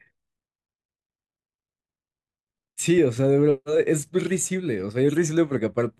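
No technical faults can be heard anywhere in this speech recording. At no point does anything in the signal chain stand out as having gone wrong.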